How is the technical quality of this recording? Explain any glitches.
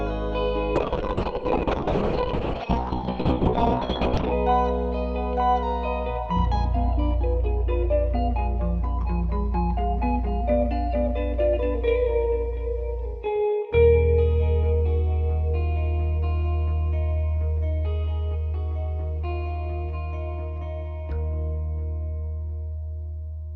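The recording has one clear glitch near the start. From 0.76 to 4.39 s there is a call bitrate drop. The encoder was starved of bits and coded coarsely, with the top end cut from 20 kHz to 6 kHz. The sound turns muffled and rough, which fits a fall to roughly 6 kbps.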